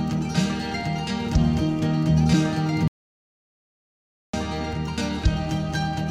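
At 2.88 s the music cuts off abruptly into dead silence, with no room tone, and jumps back in at 4.33 s, so about 1.46 s is missing. This is an audio dropout to silence, likely from the input being lost while silence kept being recorded.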